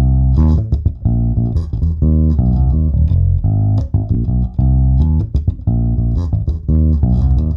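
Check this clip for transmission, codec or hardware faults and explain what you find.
Compressed frames skipped, twice: at 1.72 s and at 4.14 s. In both places the decoder never received, or refused as damaged, whole frames of the compressed stream, so it jumped ahead. The first gap drops roughly 50 ms of sound, which fits about two frames of 23.2 ms. The second drops roughly 20 ms, about one frame. Each time the sound skips forward abruptly.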